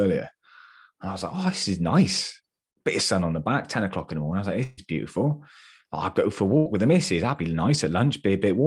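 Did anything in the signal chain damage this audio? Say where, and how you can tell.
Yes. The network stage caused two bursts of packet loss. Consecutive packets went missing, and the receiver's concealment stretched the last good audio to cover each gap while letting it fade, so you hear a brief held, decaying sound instead of new sound. This happens after "was like" from 4.63 to 4.79 s, about 140 ms, and after "i go for a" from 6.57 to 6.68 s, about 80 ms, before "with the missus". The original audio from both spans is lost.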